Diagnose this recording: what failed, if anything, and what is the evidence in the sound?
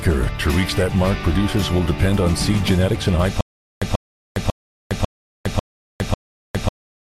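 Stutter with silent gaps from 3.41 s onward: a 138.5 ms burst repeats six times every 546 ms with silence between, likely a stalled playback stream replaying its last fragment.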